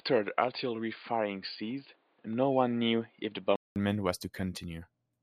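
From 0.0 to 3.76 s the speech sounds boxy, with nothing above 4.8 kHz and its own faint noise, unlike a plain filter. A 200 ms silence follows, likely from an input switched to a poorer device.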